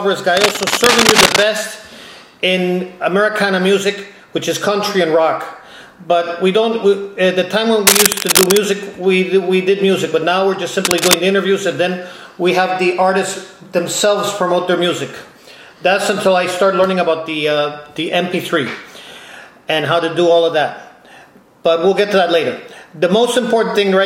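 Cable scratch noise, dense uneven rustling about as loud as the sound, appears at 0.37–1.43, 7.87–8.57 and 10.84–11.14 s, likely from a worn connector being moved, not isolated clicks.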